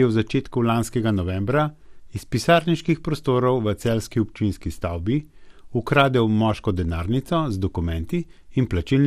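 Throughout, too few bits reach the upper sub-bands, likely from MP2 compression at a rate that fits about 80 kbps, so the speech sounds dull and gurgling, with coarse granular distortion. From 4.14 to 4.39 s, just after "iz pisarniških prostorov v", and again from 7.68 to 7.80 s, a small share of bit errors slips past error correction into the sub-band data, producing DAB burbling: wrong samples put short blips of noise in single sub-bands over the speech.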